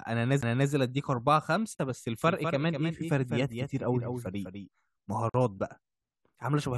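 Spoken audio with three kinds of fault. At 0.41 s there is a CD skip: a brief mute of roughly 15 ms, after which playback resumes from a different point on the disc's spiral, so the speech lurches instead of continuing cleanly. Two gaps at a join of encoded pieces open in the middle of continuous sound, at 1.75 s lasting 39 ms and at 5.29 s lasting 49 ms. Each is a short silence with smeared edges, left by encoder start-up delay and end-of-stream padding kept when separately encoded segments were butted together, and the sound picks up exactly where it stopped. From 2.19 s to 4.69 s a doubled audio track runs: a dry, full-band second copy trailing the original by around a fifth of a second and about 5 dB quieter, with no reverberant colour, cutting in and out abruptly at both ends. The likely cause is the same signal being captured again through a slower path and mixed back in.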